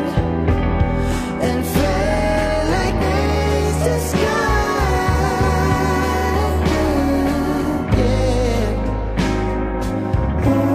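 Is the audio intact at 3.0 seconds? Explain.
No. Compressed frames are skipped from 2.98 to 3.03 s. About three 46.4 ms frames go unplayed, so the sound jumps ahead roughly 150 ms. In a lossy codec, overlapping frames leave a brief smeared blip at the join; lossless frames would join with a hard click.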